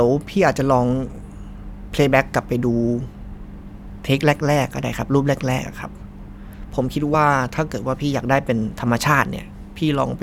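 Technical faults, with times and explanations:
3.69 s and 7.13 s: compressed frames skipped. The audio jumps ahead by roughly 70 ms, then roughly 20 ms, consistent with about three and one 23.2 ms frames going missing.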